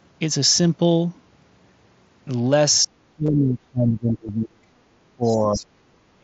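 From 2.83 to 4.71 s the echo canceller likely misjudged a stretch of double talk, mistaking the talker's speech for loudspeaker echo while the far side was also speaking, and pulled the whole signal down. The talker's speech sinks by as much as about 30 dB over roughly two seconds, dipping and thinning rather than holding steady, so it is speech suppressed in double talk.

Within that stretch, between 3.26 and 3.28 s, concealed Bluetooth headset packet loss occurs. Packets between headset and phone went missing, which fits about three lost frames. The receiver patched the roughly 22 ms gap by repeating the closest-matching piece of the preceding waveform, so the sound briefly turns into a held, buzzy tone at full level before real audio resumes with a slight warble. A second, shorter loss at 4.28 s, consistent with a single frame, is almost covered by the same repetition.

From 5.02 to 5.73 s the same suppression returns, with the talker pushed down by up to about 25 dB. 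Inside it, from 5.23 to 5.66 s, the other side's voice leaks through: the canceller likely failed to remove all of the loudspeaker signal picked up by the microphone. A second voice can be heard about 15 dB below the talker. At 6.14 s, through to the end, double-talk suppression likely strikes again, cutting the speech by around 35 dB. The mSBC headset codec leaves its light wideband graininess on loud sounds.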